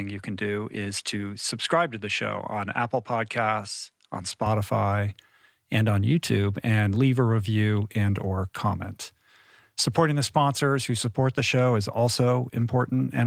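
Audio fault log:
0.00–4.46 s, input switched to a poorer device: the opening stretch of speech sounds duller and a few decibels quieter, with nothing above 11.4 kHz and faint added background noise well below the voice. At 4.46 s the sound opens up and lifts in level with no gap. The likely cause is the recording starting on a lesser microphone or headset input with a narrower band and its own noise, then changing over to the main device.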